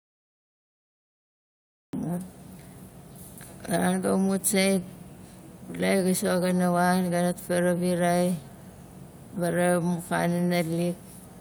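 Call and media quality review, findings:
Digital silence 0–1.93 s, then speech enters abruptly mid-sound, no natural attack. Cut-off start: capture or stream began late, missing the onset.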